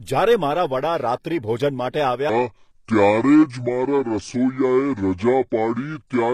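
Speech with a gritty, metallic treble and lispy s sounds throughout, likely HE-AAC compression at a low bitrate near 24 kbps. Unlike plain lowpassing, the top stays bright but synthetic. From 2.29 s to the end, a section at the wrong speed plays at 0.649 times speed, likely from a clock mismatch. Pitch and tempo drop together, roughly seven semitones deeper and slower, rather than pitch shifting alone.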